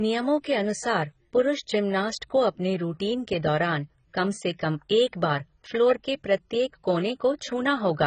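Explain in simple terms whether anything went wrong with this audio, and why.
Yes, something went wrong, and it lasts the whole clip. The speech sounds dull and smeared, with a fizzy, warbling edge on hissing sounds. Nothing is heard above 9 kHz. The likely cause is heavy AAC compression, which squeezed the file too hard and discarded detail.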